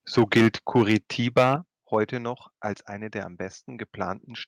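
A speech clip in which the loudest syllables take on a harsh, crackling, flattened edge at 0.18 to 0.48 s, 0.75 to 0.96 s, 1.37 to 1.53 s, and briefly at 1.94 to 1.97 s just before "noch als eine der". This is likely microphone overload: the input level was set so high that peaks ran past the converter's ceiling, by about 7, 5, 8 and 1 dB respectively, and their tops were sheared off. In the worst stretches roughly a tenth of the waveform is flattened. The level of both the voice and the background also drops abruptly twice, by about 2 dB at 0.19 s and by about 7 dB at 1.56 s, each time right after a distorted peak. That pattern points to the microphone volume being stepped down, most likely by the call software reacting to the clipping and lowering the device's input gain in one jump.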